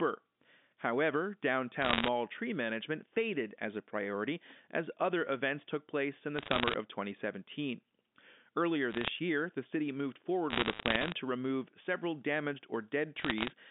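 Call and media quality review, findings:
Bit errors on the digital phone line: tick and crackle bursts at 1.82–2.08, 6.37–6.74, 8.91–9.08, 10.50–11.12 and 13.16–13.50 s. Flipped sign or high bits corrupt single G.711 samples, at roughly 0.5–1% of bits. Waveform shows isolated one-sample spikes. Spectrogram shows thin vertical lines spanning the 150 Hz–3.6 kHz band.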